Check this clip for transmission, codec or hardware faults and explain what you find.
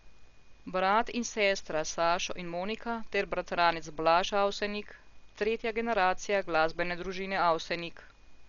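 One codec fault runs through the whole recording.

Dolby Digital compression, throughout: the speech stops dead at 7 kHz, and the bands that remain carry a coarse, fluttering noise wrapped around voiced sounds, so the damage is heavy. This likely comes from an AC-3 style encoder starved of bits, consistent with a very low bitrate near 48 kbps. It cuts off the top of the spectrum and leaves many frequency lines without detail, and the decoder fills those with dither noise. The result is dull, muffled speech with a rough, wavering texture.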